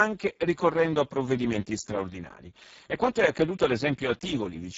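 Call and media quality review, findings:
Speex codec, throughout: heavy coding damage, speech hoarse, buzzy and partly robotic; nothing above 7.6 kHz, upper band a thin noise-like fill. Component: Speex encoder at a very low quality setting, sound consistent with roughly 6 kbps. Mechanism: too few bits for the CELP excitation, pushing the output toward vocoder-like synthesis.

DC step, 0.51 s to 3.42 s: low thump at 0.51 s as the waveform zero line jumps, offset held, second thump at 3.42 s as it steps back; speech continues unchanged across both. Component: capture path, converter recalibration or an input with an offset being switched in.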